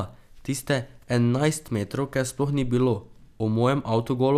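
A short speech recording with no audible technical fault anywhere in the signal.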